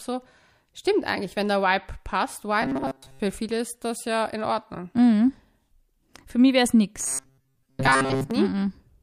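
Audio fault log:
2.62 to 3.22 s and 7.0 to 8.31 s, robotic sound from repeated short buffers: both stretches turn the speech into a stiff, metallic buzz pitched at 134 Hz. The likely cause is audio arriving too slowly, so the player keeps looping a tiny slice of about 7.5 ms instead of playing fresh material, and most of the real audio, around 70 percent, gets skipped. That loop rate sets the buzz, leaving the words only loosely traceable under the drone.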